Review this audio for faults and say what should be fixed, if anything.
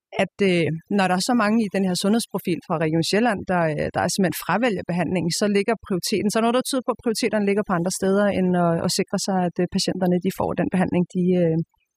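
Overdone noise removal runs through the whole speech clip. The noise reducer cuts individual frequency bands whenever they approach its noise estimate, dropping quiet speech detail with them. The background drops and breaks up into twinkling specks. Set noise reduction gently, leaving a little background rather than chasing silence.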